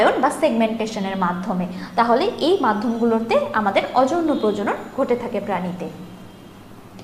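DAB burbling at 5.44 s: a few watery blips as bit errors slip past error correction, corrupting MP2 audio data so single sub-bands get short blips of noise.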